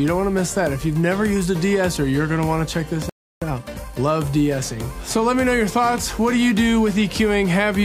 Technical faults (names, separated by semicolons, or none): playback stall; time-compressed catch-up